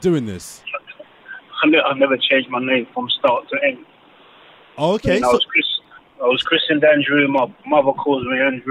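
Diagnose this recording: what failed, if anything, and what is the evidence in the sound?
Dropped samples at 3.28 s and 7.38 s: each is a single sharp click, a thin vertical line across the spectrum. The likely cause is the driver or buffer stage losing a fraction of a millisecond of samples, so the waveform jumps abruptly to a later value.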